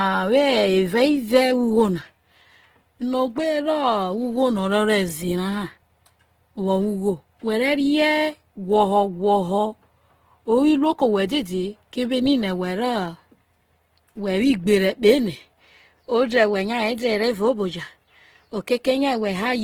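Throughout, likely Opus compression at a bitrate fitting about 16 kbps fills bands with noise, leaving the speech plainly rough and grainy.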